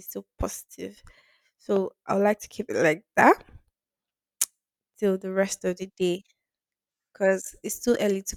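At 1.76 to 1.78 s, a single loud pop cuts through the speech. It peaks a few decibels above it. A likely voltage spike, from a plug, switch or static, caused it.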